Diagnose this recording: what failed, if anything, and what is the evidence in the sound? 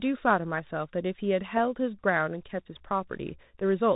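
The whole clip went through a Bluetooth CVSD headset codec, so the failure is at the codec stage. The speech is plainly narrowband with nothing above 4 kHz, the s sounds come out scratchy, and there's a grainy hiss under everything. That's what you'd expect from a 64 kbps CVSD link: it sends one bit per sample to say up or down, and when loud high-frequency energy moves faster than the adaptive step can follow, it distorts.

Near the end, from about 3.60 to 3.62 s, there's unconcealed Bluetooth headset packet loss on the link between the headset and the phone. The audio drops out for a moment, about 7.5 ms in total, which fits a couple of lost voice packets. The gap has hard edges and is filled with silence or an idle pattern rather than being smoothed over, so you hear a short abrupt hole and then the sound picks up again.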